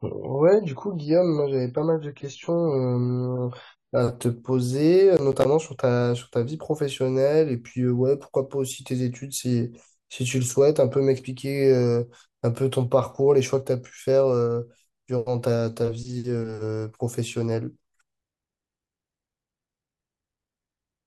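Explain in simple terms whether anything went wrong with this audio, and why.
For the first 4 seconds the speech sounds dull and smeared: an adaptive stream starting at a low bitrate, with nothing above 7 kHz until the player switches to a better version.

From 5.17 to 5.45 s there is processor overload crackle: a gritty burst of tiny silent gaps, which fits roughly seven missed audio buffers of around 10 ms each.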